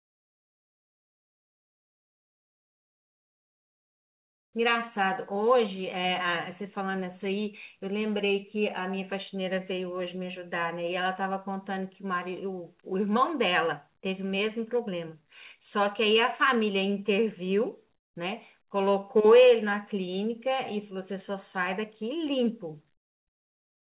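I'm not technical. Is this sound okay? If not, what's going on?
No. From the start to 4.53 s, and from 22.97 s to the end, the real background is replaced by comfort noise. It sounds like a flat, quieter hiss. The likely cause is the call pausing transmission during silence, with the receiver filling in noise.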